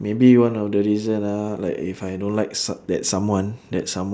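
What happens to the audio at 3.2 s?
Nothing goes wrong at 3.2 s; the speech carries on intact through that moment.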